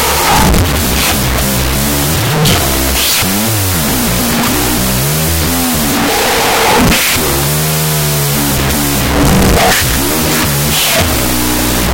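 Speech, buried under a harsh wash of noise for the whole clip: a classic wrong sample width problem. Audio written as 16-bit integers is being read as unsigned 8-bit, so each real sample gets split into two. Only the high bytes carry the actual signal; the low bytes come out as loud hash. Doubling the sample count also drops playback to half speed, pulling everything down an octave and dragging it out.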